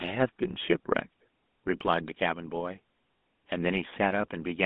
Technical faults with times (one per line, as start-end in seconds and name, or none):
0.00-4.66 GSM full-rate codec